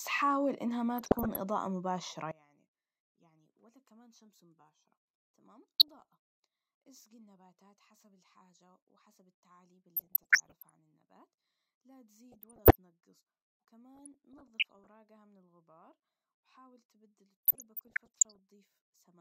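Right at the start, 0.97 to 1.37 s, there's DAB burbling: weak reception lets bit errors, around half a percent, slip past error correction into the MP2 data, so single sub-bands jump in level and you get short blips of noise over the speech. From 2.31 s to the end the level drops by about 26 dB and the speech goes faint, most likely because one channel was inverted and the mono sum cancels everything centred. The burbling returns at 5.79 to 6.13, 9.96 to 10.71, 12.32 to 12.75, 13.95 to 14.88 and 17.45 to 18.39 s.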